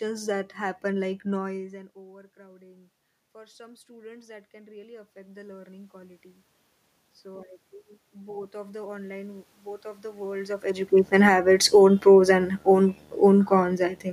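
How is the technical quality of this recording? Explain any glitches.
The recording has audible level instability from automatic gain control working against changes in the talker's distance from the microphone.

Automatic gain rising, 1.54 to 6.27 s: after the talker moves away around 1.5 s, the input drops by about 23 dB. The gain control compensates by raising gain about 10 dB over nearly five seconds, so voice and room noise swell together slowly.

A second automatic gain rising runs from 8.12 to 12.3 s, adding about 4 dB. Inside it, from 10.99 to 12.05 s, there is an automatic gain falling: following the talker's movement near 10.5 s, the control finds the input too loud or its background noise too strong and pulls gain down about 3 dB. The level first sits high and then sinks with its background before the slower rise resumes. The two opposing adjustments produce an uneven, pumping level across that stretch.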